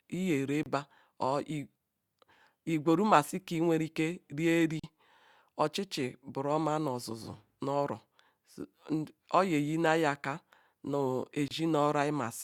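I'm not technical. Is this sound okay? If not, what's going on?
No. The speech drops out three times, each for a split second: at 0.63 s for about 29 milliseconds, at 4.80 s for about 41 milliseconds, and at 11.48 s for about 28 milliseconds. This is a gap at a join of encoded pieces. The recording was saved in separate chunks and then stuck together. Each chunk kept a sliver of silence at its edges. The speech then resumes right where it stopped.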